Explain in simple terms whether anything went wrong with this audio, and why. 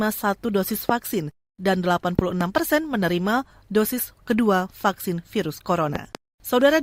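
Sharp loud pops cut through the speech at 0.89–0.92 s, then double pops at 2.19–2.43 s and 5.96–6.17 s, likely from electrical spikes, such as static or a switch.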